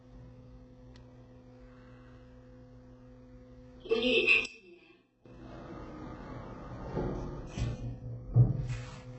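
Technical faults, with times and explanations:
Throughout: HE-AAC compression. Nothing reaches above 8 kHz, and the damage is heavy. The upper range sounds synthetic and grainy rather than simply dull, which likely comes from HE-AAC at a very low rate, on the order of 8 kbps. The codec spends its few bits on the lower spectrum and fakes the treble by copying lower bands upward under a coarse envelope. The copied harmonics don't line up with the real ones, so bright, noisy parts of the sound come out gritty and metallic.
4.46 to 5.26 s: one channel inverted. For about 0.8 s the sound collapses by about 21 dB, then returns at full level. This is likely one stereo channel flipped in polarity, so that when the channels are summed to mono everything they share cancels. What survives is only the small difference between left and right, a faint ghost of the sound with its solid, centred body gone.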